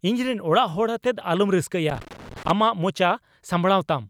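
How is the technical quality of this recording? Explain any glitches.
There's one real glitch in this speech clip: loose connector crackle from about 1.90 to 2.51 s. For roughly 0.6 s a worn or dirty contact is making and breaking as it shifts, chopping the signal, so you get an irregular, scratchy burst of crackle.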